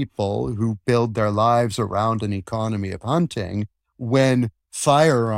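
Audio carries no audible faults.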